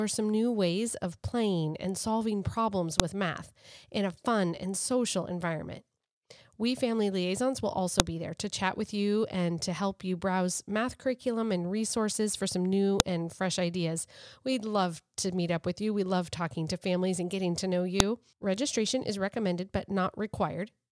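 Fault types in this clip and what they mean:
File header played as audio: separately encoded 5-second WAV pieces were joined without stripping their headers, so those header bytes play back as samples. In this speech clip that gives a sharp, loud click at each piece boundary, at 3.0, 8.0, 13.0 and 18.0 seconds.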